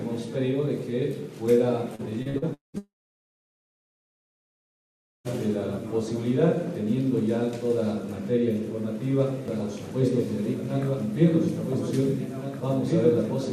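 From 1.95 to 2.77 s the sound turns choppy, with pieces missing, with five short holes, the longest about 200 ms, and roughly two fifths of the stretch patched over. This is repeated packet loss: audio kept arriving late or not at all, and each gap was filled by extending the last fragment.

Straight after, from 2.78 to 5.28 s, the final sound smears briefly, then gives way to near silence for about 2.4 s. The audio resumes with that whole section missing. This is most likely a long network dropout, where nothing reached the receiver and its concealment soon faded out.

From 9.48 s to the end, a doubled audio track appears. A second full-band copy trails the original by about 1.5 s at about 5 dB lower, with no reverberant tail, and it cuts in abruptly. The cause is likely a slower duplicate capture path mixed back in.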